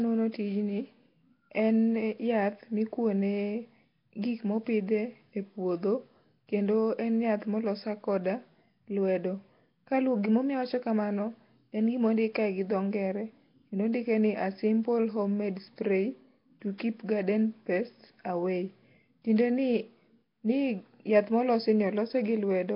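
Throughout, the speech has heavy Nellymoser compression damage, likely from Flash's Asao codec. Starved bands are noise-filled, leaving a hissy, underwater smear with nothing above 5.3 kHz.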